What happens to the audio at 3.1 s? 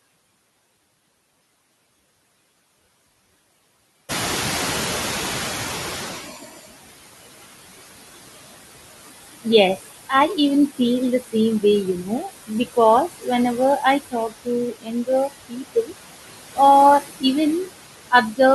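At 3.1 s the noise suppressor artifacts that run through the whole clip are audible. The suppressor estimates which frequency bands hold steady background noise and pulls them down frame by frame, cutting the noise by about 19 dB, so the floor dips between phrases and swells back under speech. On a spectrogram the background appears as patchy, flickering low-level speckles rather than an even haze, and the waveform's quiet gaps sit almost flat. The room noise itself is still low here, before it rises at roughly 4 s.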